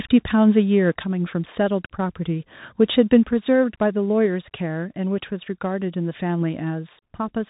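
Bluetooth CVSD headset codec runs through the whole speech clip. The headset link sends one bit per sample, each saying only whether the waveform should step up or down, with a step size that adapts. That delta scheme fits a 64 kbps CVSD stream. Nothing above 3.8 kHz survives, so the speech sounds narrow and boxy. The damage is plainly audible: sibilants turn scratchy, louder bright passages distort where they outrun the step size, and a granular hiss sits beneath the voice.

Microphone volume stepped down three times, at 1.02 s, 3.24 s and 4.26 s. Each time, voice and background drop together in a single abrupt step, by about 3 dB at the first two points and about 1 dB at the third. The level does not recover afterward, so each step leaves the speech quieter than before. The likely cause is call software judging the microphone too hot and lowering the device's input volume in one move rather than fading it.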